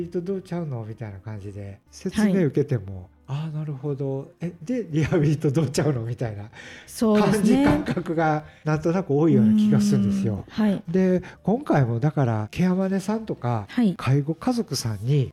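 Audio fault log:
No faults can be heard anywhere in this clip.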